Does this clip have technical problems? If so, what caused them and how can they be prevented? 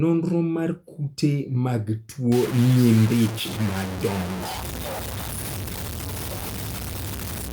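Yes. From 2.32 s to the end, the speech turns grainy, with harsh distortion that tracks the voice, around 10 dB below it. This is low bit depth without dither, likely truncation to about 4 bits. Prevent it by keeping adequate bit depth and dithering before any reduction.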